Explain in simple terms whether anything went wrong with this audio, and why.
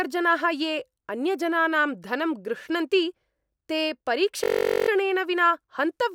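Something did go wrong, from about 4.44 to 4.89 s. That stretch is a system hang loop: the computer briefly froze, but the sound hardware kept replaying the last little chunk it was holding. That chunk lasts about 21 ms, which fits a 1024-sample buffer, and it repeats 21 times at nearly 47 times a second. Because the piece is so short, it comes across as a steady buzz rather than a stutter, and then the speech carries on.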